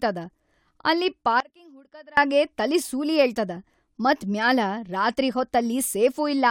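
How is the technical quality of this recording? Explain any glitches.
The recording has one clear glitch, a dropout in the speech. From 1.40 to 2.17 s there is an audio dropout to a faint residue lasting about 0.77 s: the speech abruptly falls to a weak leak roughly 25 dB down, then snaps back before "ತಲಿ ಸೂಲಿ ಏಳ್ತದ". The likely cause is a momentary signal-path interruption that left the downstream chain live. On a waveform it looks like a sharp-edged, near-flat stretch. On a spectrogram it appears as a pale band with vertical edges rather than a gradual fade.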